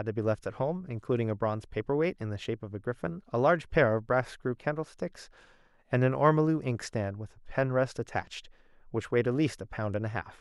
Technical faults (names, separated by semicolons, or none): none